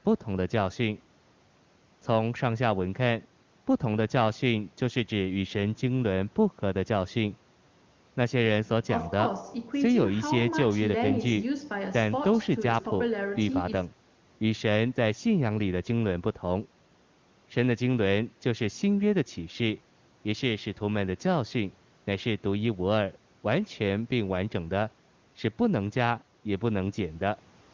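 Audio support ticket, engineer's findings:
Engineer's findings: no faults found in this speech clip; the call microphone processing and AMR-WB codec at 23.85 kbit/s both check out as expected.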